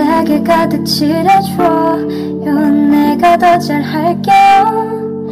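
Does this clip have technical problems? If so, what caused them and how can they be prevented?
Yes. Hard clipping runs through the whole clip: the signal is driven about 8 dB past what a stage can pass, so roughly a tenth of the samples hit the limit and are cut flat, adding harsh high harmonics as fuzz on loud passages. Lowering gain before conversion prevents it.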